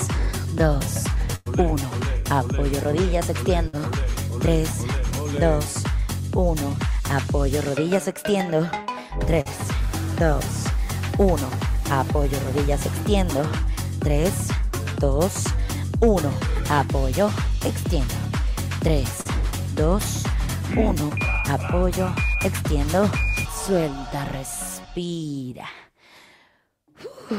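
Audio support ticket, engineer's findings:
Burst of packet loss, network/jitter buffer: consecutive packets dropped or late at 1.35–1.48 s (100 ms missing) and 3.68–3.75 s (60 ms). Decoder extends last sound, fading buzz/hiss, then skips ahead.

Short concealed packet loss, network/decoder: about 40 ms never arrived at 9.41–9.47 s and 19.21–19.27 s. Concealment synthesises fill, heard as brief smear or wobble before blending back.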